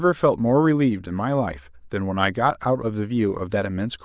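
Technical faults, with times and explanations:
No technical faults can be heard in this speech.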